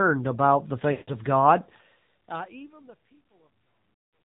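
Throughout, the speech has been squeezed through the AMR narrowband mobile codec at a low bitrate, which fits the 7.4 kbps mode. Nothing above 4 kHz survives, and the sparse pulse-driven vocal tract model leaves the voice plainly buzzy and synthetic, dulled at the top.

From 0.92 to 1.11 s, lost AMR speech frames follow, about 160 ms in all. The decoder keeps repeating its last good pitch and vocal tract settings at falling gain, so the sound smears, drains to silence, then returns weak and rough before the gentle fade-out toward the end.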